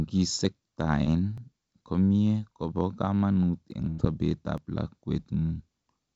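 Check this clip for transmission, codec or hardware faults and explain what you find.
Three kinds of fault appear in this speech, plus a band limit at 7 kHz that fits a G.722 call path.

Dropped buffer (overrun): jumps at 0.45, 1.38, 2.51, 3.71 and 4.58 s. Each is a small forward jump, roughly 10 to 20 ms. Likely, unread samples were overwritten before capture.

Short concealed packet loss: 1.04 to 1.08 s. About 20 ms never arrived. The receiver extended the preceding sound for 19 ms, giving a brief smear before real audio returns.

Burst of packet loss: 3.89 to 4.00 s. About 80 ms went missing in a row. The gap was filled for 88 ms with continued, fading sound, heard as a held buzz or decaying hiss. The speech then picks up further along.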